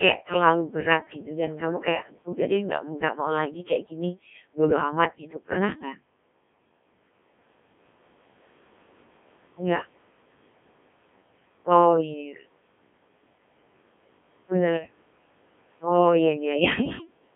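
Speech passed through a Codec 2 vocoder for the whole clip. It sounds robotic and buzzy, with heavy damage, which fits a very low rate near 1.3 kbit/s. Sound is band-limited to roughly 150 Hz to 3.5 kHz, with nothing above 3.7 kHz.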